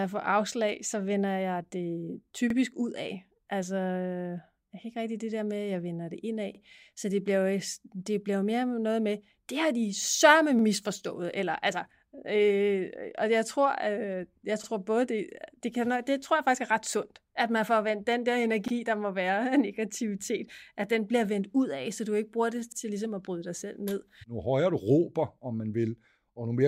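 Overlapping chunks: the speech was processed in 4-second blocks, each starting 44 ms before the previous one ended, so that slice plays twice at every join. The result is a brief stutter or click at 2.50, 6.55, 10.59, 14.64, 18.68 and 22.72 s.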